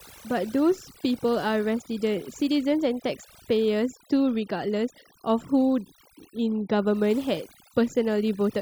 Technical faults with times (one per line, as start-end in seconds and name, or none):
0.00-8.62 overdone noise removal